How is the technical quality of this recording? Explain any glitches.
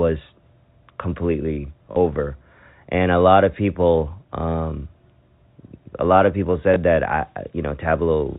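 The recording has two brief dropouts where lost packets were covered by repeating earlier audio, heard over the narrow, telephone-band sound of G.711 coding that cuts everything above 4 kHz.

Packet loss with last packet repeated: at 1.92 to 1.96 s, and at 6.74 to 6.76 s between "a lot of people" and "that I", packets went missing and the receiver replayed the last good one to fill the gap. The first gap lasts 40 ms, which fits two lost 20 ms packets, and the second lasts 20 ms. The longer gap gives a short, robotic stutter, and the single repeat a small blip.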